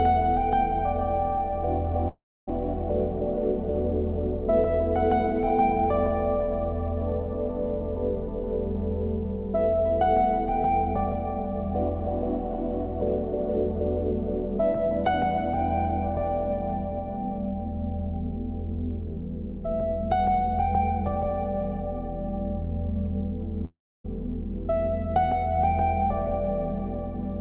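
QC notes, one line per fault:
2.08–2.49 s and 23.65–24.06 s, long network dropout: each time the sound turns into a fading buzz that dies away to silence lasting about 0.3 s, and when audio returns roughly 0.4 s of material is gone. The likely cause is that packets stopped arriving over the G.711 mu-law call path. The receiver smeared the last received sound forward to cover the gap, then muted once that concealment ran out, and playback resumed past the lost stretch.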